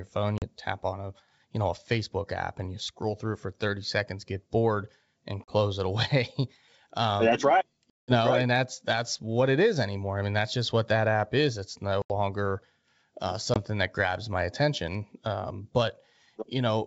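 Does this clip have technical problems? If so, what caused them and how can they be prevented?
Yes. Packet loss on an ADPCM call causes hard-edged silent gaps at 0.38–0.43, 5.44–5.52, 7.90–8.16 (longest), 12.02–12.12 and 13.54–13.59 s. After each gap, the decoder's predictor and step size briefly mismatch the sender's, leaving the returning speech slightly distorted. A jitter buffer with packet-loss concealment and predictor-state resets would prevent this.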